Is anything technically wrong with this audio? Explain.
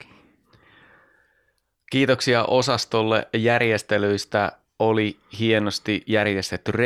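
No, nothing technically wrong is audible in this speech recording.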